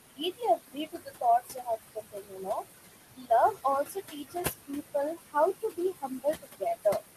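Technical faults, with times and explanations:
Throughout: noise suppressor artifacts. The suppressor lowers each frequency band it judges to be steady noise by about 18 dB, frame by frame. The room noise, sitting about 9 dB below the speech, drops away in the gaps and returns under the speech.
0.1–1.23 s, 1.4–2.64 s, 3.16–3.31 s, 3.87–4.95 s, 5.16–5.35 s, 5.54–7.02 s: speech cut by the noise suppressor. Parts of the speech were mistaken for noise and turned down with the background, by about 17 to 21 dB at the deepest points. Only some of each span is hit, roughly half a second in the longer stretches and a brief moment in the shorter ones. Soft consonants and word endings sound swallowed or faint.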